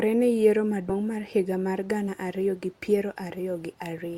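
Speech with a short break at about 0.89 to 0.92 s, where the sound jumps ahead, losing roughly 70 ms. This is compressed frames skipped: around four frames are missing or rejected as damaged, which fits 20 ms frames.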